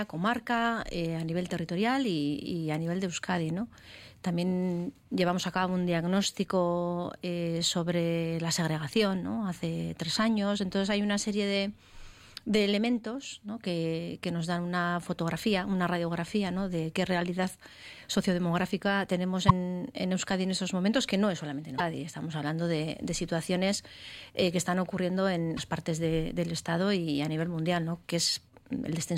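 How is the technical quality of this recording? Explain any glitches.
Three brief glitches occur, at 19.48, 21.77 and 25.56 s. Each is a roughly 30 ms skip and garble, likely a broken MP3 bit reservoir: frames were lost, so the next frame borrowed bytes from the wrong data.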